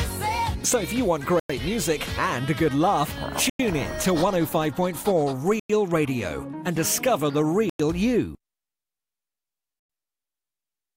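The audio is interrupted by four gaps between chunks, hard-edged silences of 100 ms each at 1.40–1.50, 3.50–3.60, 5.60–5.70 and 7.70–7.80 s. They recur every 2.1 s, which fits 2-second chunks, each followed by the same added silence from padding or a late start. Unlike dropouts from lost packets, nothing is missing: the sound resumes exactly where it stopped, only delayed, and the strict regularity rules out random loss.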